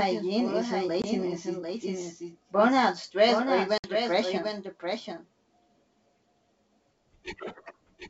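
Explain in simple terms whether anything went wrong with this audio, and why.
A doubled audio track runs through the whole clip. A second copy of the same speech, a little quieter than the first, trails it by about seven tenths of a second. It sounds like a dry, flat repeat with no room echo, most likely because the sound was captured twice along paths of different speed.

There is packet loss on an ADPCM call twice. From 1.02 to 1.06 s, just before "it is burnout stress", about 20 ms of sound drops to silence, which fits one lost packet. From 3.78 to 3.92 s, right after "is burnout stress or", a longer 60 ms gap points to roughly three lost packets. Each hole has a hard edge. This kind of coder predicts each sample from the ones before it, so after a gap the receiving end is out of step with the sender. The speech comes back slightly rough, and settles within a few tens of milliseconds.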